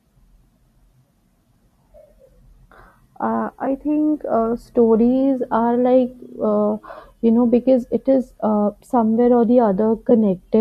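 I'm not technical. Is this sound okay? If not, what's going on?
No, not quite. There are two tiny glitches from AAC frame loss with concealment: a single lost chunk of about 10 ms that the decoder patched with a brief smeary blip, at 3.66 s just before "think uh stories are" and at 10.10 s right after "uh somewhere or the". The light graininess in the speech is likely from the low-delay AAC compression that video calls use.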